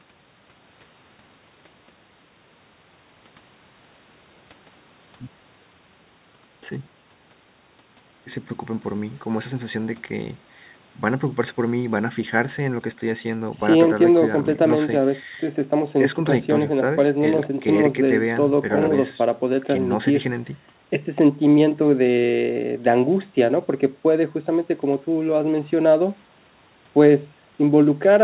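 No technical faults occur anywhere in this speech, which arrives over a call path with nothing above 4 kHz, fitting narrowband G.711 A-law coding.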